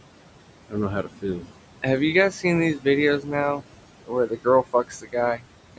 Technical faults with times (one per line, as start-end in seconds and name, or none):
0.00-5.78 converter idle tones
0.00-5.78 noise suppressor artifacts
0.69-1.51 speech cut by the noise suppressor
3.21-3.66 speech cut by the noise suppressor
4.05-5.44 speech cut by the noise suppressor